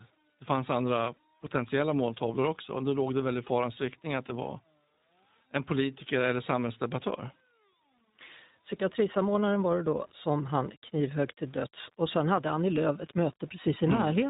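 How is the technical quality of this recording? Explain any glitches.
The recording has poor technical quality: two faults run through the entire speech clip.

Low bit depth without dither: a grainy, signal-following distortion sits around 30 dB below the speech, roughening quiet passages and sputtering on decays. The likely cause is coarse rounding to about 8 bits without dither, so the quantisation error tracks the waveform instead of forming a steady hiss.

iLBC codec: nothing passes above 3.8 kHz, giving a narrowband, telephone-like sound, and the speech is plainly rough and synthetic. Each 20 ms frame is coded independently, and the texture fits the 15.2 kbps iLBC mode, whose coarse excitation coding produces that rough edge.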